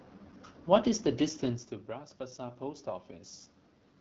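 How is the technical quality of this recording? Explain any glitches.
The technical quality is fairly compromised. It's a low-rate wideband phone call with a level swell partway through.

The whole clip carries the AMR wideband (HD Voice) codec, and the damage is plainly audible. The speech sounds rough and raspy, which fits one of its lowest rates, around 8.85 kbit/s. That rate has too few pulses to model the voice cleanly, and nothing reaches above 7.8 kHz.

From 1.86 to 3.42 s there's automatic gain rising. Around 1.5 s the talker moves off the mic and the input drops by about 16 dB. The AGC then climbs about 4 dB over that stretch, so the voice and the room noise swell up together.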